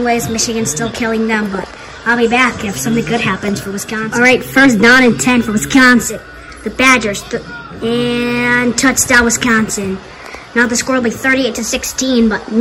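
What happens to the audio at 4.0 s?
At 4.0 s the audio is hard clipped, as it is across the whole clip. The signal is driven about 12 dB past what the stage can pass, so the tallest peaks, roughly 2 percent of samples, are sliced flat. Those squared-off tops add harmonics high into the spectrum, heard as crackle and harsh fuzz on loud moments. A waveform shows peaks cut flat; a spectrogram shows vertical smears of high-frequency energy at each peak.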